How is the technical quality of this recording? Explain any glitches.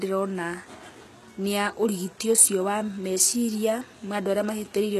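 The recording has plainly audible codec damage throughout the speech. The treble sounds synthetic and the s sounds come out gritty and lispy, which points to HE-AAC compression at a very low bitrate, around 16 kbps, as the likely cause. Only the lower spectrum is truly coded; the upper band is rebuilt by copying lower bands upward under a coarse envelope, so harmonics misalign. A spectrogram shows smeared, repeated-looking treble patches and nothing above 12.4 kHz.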